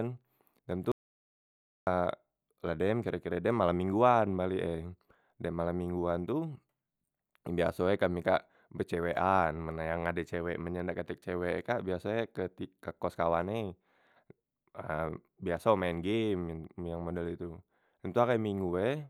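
The input signal was likely lost from 0.92 to 1.87 s, an audio dropout to silence: the speech cuts to dead, roomless digital silence for about 0.95 s, then resumes mid-flow.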